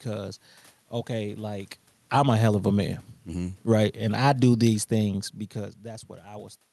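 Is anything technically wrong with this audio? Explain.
Yes, the level control is wandering. Right after "okay like", from 1.99 to 5.46 s, there's automatic gain falling: the AGC decided things were too loud and eased down about 7 dB, so voice and background sink together. From 2.25 to 2.78 s there's automatic gain rising: the AGC briefly reversed, pushing up about 6 dB, so everything swells for half a second before continuing down. The level shifts near 1.5 and 5.5 s sound like the talker moving, and the top end stops around 12 kHz, which fits an Opus call codec.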